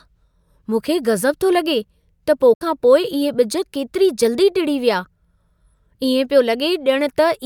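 A short disturbance breaks into the speech at 2.52 s and lasts until about 2.61 s, just before "खां पोइ इहे". This is damaged data in a compressed stream: some of the encoded bytes there were lost or corrupted, so the decoder misread those frames, lost sync, and skipped forward to the next frame header it could find, producing the brief burst.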